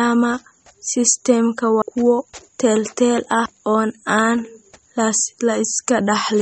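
From the start, the speech has nothing above 8.4 kHz and plainly audible codec damage: a watery, swirling texture as weak frequency components drop in and out between frames, with smeared consonant onsets. This is likely MP3 compression, consistent with a low bitrate around 32 kbps.

At 1.82 s a CD skip occurs. The laser jumped to a different turn of the disc spiral, and the player muted for a few milliseconds before resuming elsewhere. It is heard as a brief tick followed by an abrupt discontinuity in the speech.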